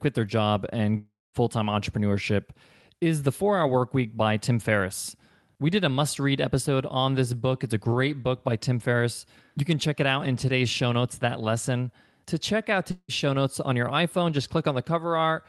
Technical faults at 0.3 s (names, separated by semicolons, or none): none